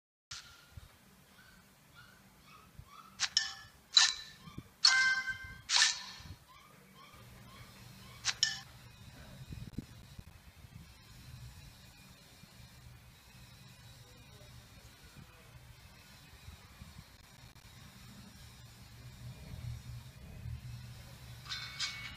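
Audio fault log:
0.00–0.31 s, cut-off start: the audio begins already in progress, jumping from digital silence straight into the middle of a sound at 0.31 s with no attack or fade. That abrupt, hard-edged entry is what separates it from a deliberate quick fade-in.
9.70–10.31 s and 17.17–17.73 s, processor overload crackle: each burst is a string of short dropouts to silence, with gap spacing that points to buffers of roughly 10 ms. The first has about ten, the second somewhat more. The gritty tearing stops cleanly once the load passes, unlike clipping, which follows loud peaks.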